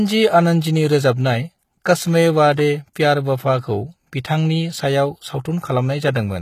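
From the start of the speech to the end, the treble sounds synthetic: sibilants come out gritty and lisping, with a metallic sheen that doesn't track the lower harmonics. The likely cause is HE-AAC compression, where only the lower band is coded and the upper band is rebuilt by spectral band replication, copying lower content upward under a coarse envelope. The damage is plainly audible, which fits a very low bitrate, around 20 kbps.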